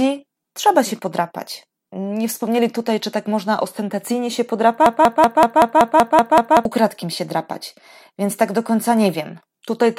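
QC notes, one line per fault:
4.86–6.65 s, broken-record loop: a 190 ms speech fragment repeats nine times, likely from a stalled player or stream replaying its last fragment, so the audio for that span is lost.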